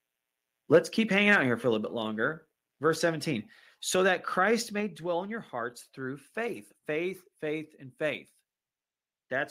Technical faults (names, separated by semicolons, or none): microphone overload; microphone volume stepped down